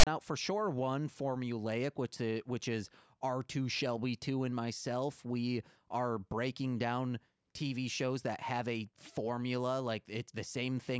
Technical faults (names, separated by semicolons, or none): file tags played as audio